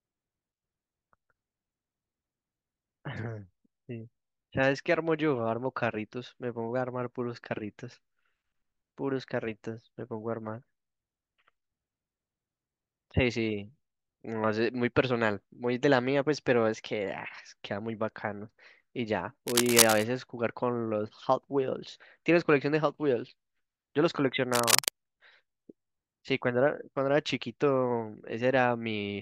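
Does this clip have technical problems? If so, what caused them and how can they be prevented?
Yes. Cable scratch noise breaks into the speech twice, from 19.47 to 20.04 s and from 24.53 to 24.91 s. Each burst is a dense, ragged crackle, roughly as loud as the speech itself. The likely cause is a worn cable or connector being moved. Its contact resistance then jumps around rapidly, adding this rough scratching over the sound. Replacing worn leads and securing cables so they cannot shift during recording would prevent it.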